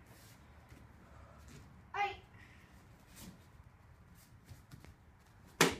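A loud pop arrives at 4.85 s and is over by 4.88 s: a single sharp crack standing out roughly 10 dB above the surrounding sound, which continues underneath without a break. The cause is likely a sudden voltage step or spike, such as a connector being disturbed, a switch changing state, a static discharge or a driver glitch, which the downstream circuitry then smooths into one brief, hard-edged burst.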